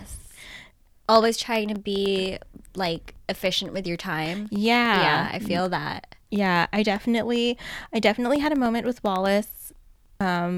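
A speech recording with periodic USB or driver dropouts running from about 0.06 s to 10.46 s. Every 0.1 s a tiny slice of audio, around half a millisecond, drops out to silence. That gives a steady train of ticks, roughly ten a second, audible wherever there's speech. The even spacing points to something on the system stalling the USB bus or audio driver on a fixed schedule.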